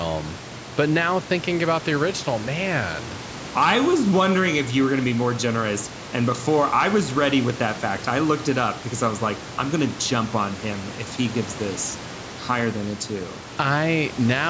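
No technical faults can be heard in this speech recording.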